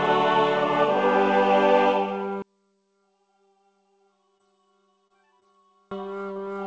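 From 2.42 s to 5.91 s the sound drops by about 37 dB. One channel is inverted, likely. Its polarity is reversed, so the shared centre content cancels when both channels sum to mono. Only faint differences remain.

Within that stretch come short concealed packet losses, at 4.38 s, 5.07 s and 5.40 s, and a fourth follows at 6.33 s. Each time, about 20 ms of audio failed to arrive. The decoder filled the gap by extending the previous sound. Each one is heard as a brief smear or wobble.

Through the call path, nothing reaches above 8 kHz, which fits a G.722 codec at 64 kbps.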